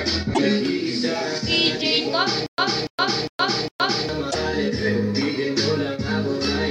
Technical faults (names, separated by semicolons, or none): stutter with silent gaps